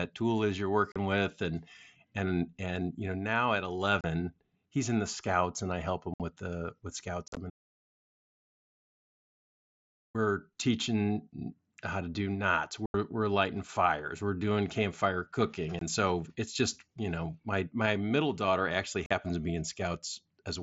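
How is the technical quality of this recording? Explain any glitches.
The recording has two kinds of fault: repeated short holes from unconcealed Bluetooth headset packet loss, and one long audio dropout to silence. The wideband mSBC headset link carries the speech with only light grain on loud sounds.

Unconcealed Bluetooth headset packet loss occurs seven times. The first is at 0.92 to 0.96 s, between "tool is you're" and "with and and and". The next is at 4.01 s, after "you know now at". Others fall at 6.14 to 6.20 s, at 7.28 to 7.37 s, at 12.86 to 12.94 s, and at 15.79 to 15.82 s. The last is at 19.06 to 19.11 s, between "my middle daughter actually" and "to be". Voice packets between headset and phone never arrived, and nothing filled the gaps. Each hole lasts 23 to 83 ms and has hard edges. The 7.28 s event is scattered over 90 ms, with its longest run at 45 ms, so it sounds chopped and crackly.

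An audio dropout to silence runs from 7.50 to 10.15 s, about 2.6 s. The sound stops mid-flow and returns just as abruptly. The gap is silent, with no room tone at all. Whatever was said then is lost. The likely cause is the input being cut off, through a failed link or a momentary disconnect, while the recorder kept writing silence.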